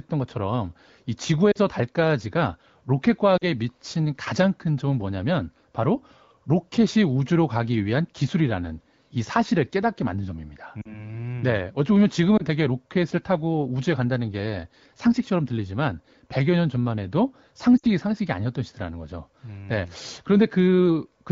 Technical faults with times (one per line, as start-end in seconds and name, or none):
1.52-1.58 lost AMR speech frames
3.37-3.46 lost AMR speech frames
10.82-11.12 lost AMR speech frames
12.37-12.43 lost AMR speech frames
17.78-17.86 lost AMR speech frames